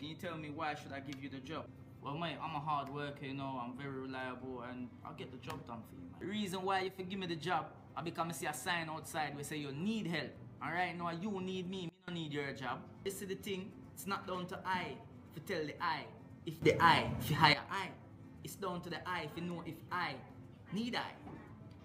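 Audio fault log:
6.87–6.99 s, 11.89–12.08 s and 16.62–17.53 s, sudden gain jump: the sound and its background noise drop by about 6 dB, then about 24 dB, then rise by about 13 dB, each change instant, likely a gain setting applied in one step without a ramp.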